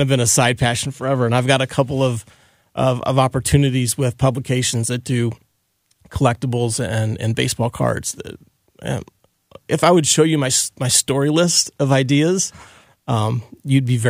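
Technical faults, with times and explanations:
Nothing technical goes wrong anywhere in this speech recording, so there's nothing to flag here.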